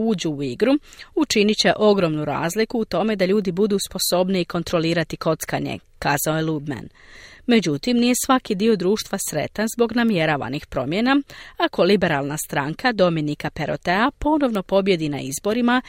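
Sharp ticks at 10.09 s, after "dio društva sretan zbog", and at 14.55 s are bit error spikes: one flipped-bit sample each, peaking at about -16 and -10 dBFS.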